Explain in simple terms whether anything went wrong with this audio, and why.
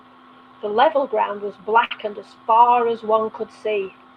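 Around 1.84 to 1.92 seconds, one sound in the speech is held slightly too long, with a slight buzz or dip, before it carries on normally. This is a short stall from a late packet: the data arrived late, so the receiver stretched the last sound for about 63 milliseconds. Nothing was lost; the speech just paused in place.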